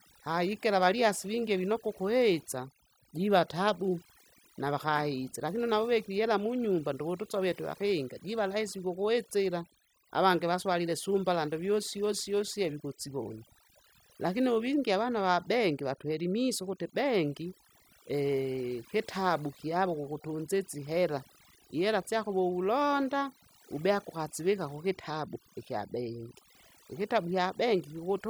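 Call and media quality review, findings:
Overdone noise removal, throughout. Noise reduction set too aggressive, gating bands near noise estimate; background drops, breaks into twinkling specks.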